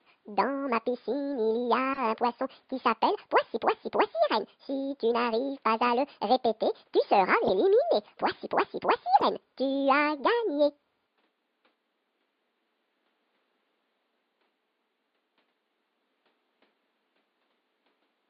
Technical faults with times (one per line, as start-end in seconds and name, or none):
1.93-2.00 corrupt frame decoded
7.47-7.50 corrupt frame decoded
9.18-9.24 corrupt frame decoded